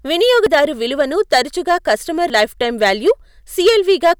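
Speech with hard clipping all the way through: it's driven about 6 dB past full scale, so a small slice of the peaks get squared off and crackle on the loudest syllables. There are also two points where the audio jumps ahead, at 0.46 s (a tiny skip, around 20 ms) and at 2.30 s (a bigger one, around 50 ms), most likely dropped buffers from an overrun.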